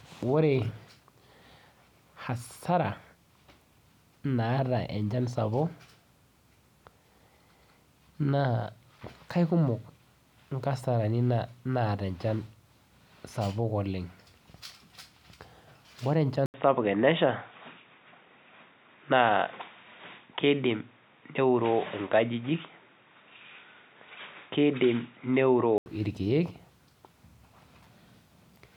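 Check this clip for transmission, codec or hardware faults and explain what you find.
One fault is present. From 16.46 s to 25.86 s the speech turns dull and boxy, with nothing above 3.8 kHz, after an 80 ms gap, plus faint new background noise at unchanged loudness. The likely cause is an input switched to a poorer, narrower-band device.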